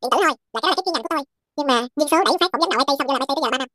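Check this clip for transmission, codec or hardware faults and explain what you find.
One fault runs through the whole clip: the audio is read two samples at a time, giving double speed. The reader treats each pair of samples as a single frame, as if the stream had two channels or samples twice as wide, so the speech plays at twice the speed and a full octave (12 semitones) higher.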